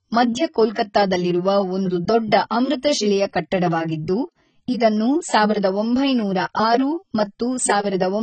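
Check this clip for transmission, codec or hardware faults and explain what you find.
Two codec faults are audible in this speech.

AAC compression, throughout: nothing reaches above 8.5 kHz and the damage is heavy, likely from AAC-LC at a low rate around 16 kbps, leaving speech dull, smeared and fizzy.

Pre-echo at 0.74 s: the codec spread quantisation noise across its whole block, so a short hiss of about 19 ms leads into a sharp attack that sounds softened.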